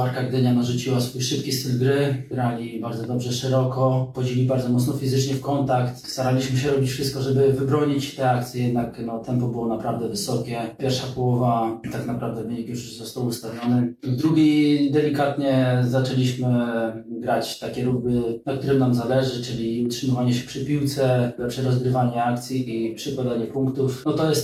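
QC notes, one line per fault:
No faults detected.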